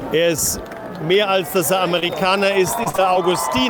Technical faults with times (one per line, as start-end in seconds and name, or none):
1.99-2.24 short concealed packet loss
2.83-3.17 repeated packet loss (robotic sound)